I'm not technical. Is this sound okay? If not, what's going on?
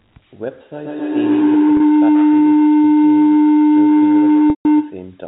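No, it's not okay. Two things are going wrong.

The big one is a feedback howl, running from about 0.72 s almost to the end at 5.19 s. It sounds like two devices in the same room are on the call, so the microphone keeps picking up the loudspeaker and sending it round again, louder each time. That loop settles on a low, droning tone and ends up much louder than the speech.

The second is packet loss with pitch repetition, happening twice. Bits of the audio went missing, and the receiving end covered each gap by repeating the last tiny slice of sound. At 1.77 s the gap is only 30 milliseconds, which fits one lost packet, so you get a brief, slightly buzzy held sound. At 4.5 to 4.65 s the gap is 150 milliseconds, long enough that the repeat fades into silence before the speech cross-fades back in. The phone-line format itself is doing its normal job underneath all this.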